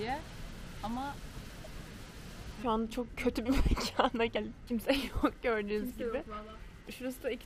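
At 1.63 to 1.67 s a brief glitch interrupts the sound and the audio jumps ahead. The likely cause is a broken MP3 bit reservoir: after a cut, frames of about 26.1 ms reached back for borrowed data and decoded bytes from the wrong frame.

At 4.35 s compressed frames were skipped. Around five frames, roughly 150 ms of audio, never played, so the sound leaps forward with a brief, smeared blip rather than a click. The waveform shows a short smeared join, and the spectrogram shows a thin vertical blur.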